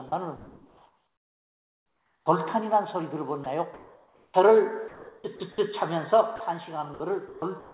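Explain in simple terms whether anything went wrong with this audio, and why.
Several things went wrong, and they all trace back to the sending side deciding when there was sound worth sending.

First, sound dropped by the voice detector. At 0.08 s and again at 6.36 s, about 40 ms of sound simply vanishes and a flat hiss takes its place. The likely cause is the detector mistaking a quiet bit for background and briefly stopping transmission, so the receiver filled the gap with made-up noise.

Second, comfort noise in place of the background, from 0.08 to 2.26 s. The real background is swapped for a smooth, featureless hiss for nearly two seconds. The sender likely went quiet because it heard nothing it counted as worth sending, and the receiver generated a rough imitation of the room to avoid dead silence. The detail of the real background is gone during that stretch.

Third, sound chopped by the voice detector, from 3.44 to 4.34 s, from 4.88 to 5.58 s, and from 6.94 s to the end. 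Here the detector kept switching on and off, so bits of sound get replaced by that synthetic hiss. The result is choppy. This likely comes from the detector being too eager to cut.

The call line itself also trims everything above 4 kHz, so the audio sounds somewhat muffled throughout.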